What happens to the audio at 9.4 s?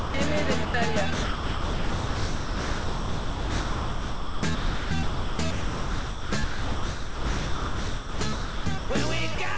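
From 9.35 to 9.38 s the sound cuts out for about 30 ms and is replaced by steady noise or near silence before it resumes. This is likely sound dropped by the voice detector, with comfort noise filling the gap. A packet-loss gap would instead sound like silence or a smeared repeat of the preceding sound.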